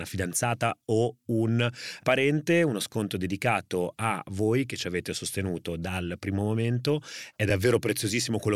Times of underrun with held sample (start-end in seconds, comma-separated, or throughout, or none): 7.50